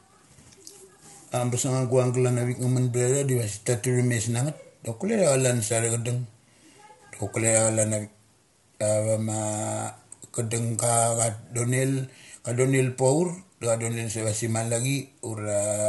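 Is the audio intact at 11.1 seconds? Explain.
No. At 11.1 seconds, as across the whole clip, the speech carries plainly audible low-delay AAC compression damage, likely from AAC-ELD. Its short low-delay frames, coded at a low bitrate, leave too few bits to code the voice's harmonics cleanly. The voice sounds rough and grainy, with noise filling the gaps between harmonics, and nothing is present above 11.6 kHz. The degree of damage fits a bitrate around 32 kbps.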